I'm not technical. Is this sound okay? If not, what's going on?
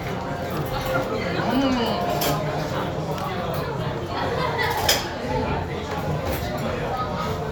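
Yes, this one's fine: nothing here sounds broken or out of place, so you can relax about it.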